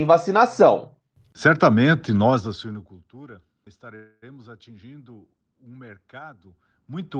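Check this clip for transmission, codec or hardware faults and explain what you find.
There is one fault, a call audio freeze running from 3.95 s to 4.24 s. The speech stops advancing and the last sound is stretched into a fading buzz or hiss for about 0.27 s, ending with a brief silence of about 10 ms. The likely cause is packets held up in transit so that the jitter buffer ran dry and the receiver extended what it had. When the speech picks up again it continues exactly where it left off, so nothing is lost and everything after is simply delayed by about 0.27 s. That distinguishes it from packet loss concealment, where a piece of the speech is skipped and the timing stays the same.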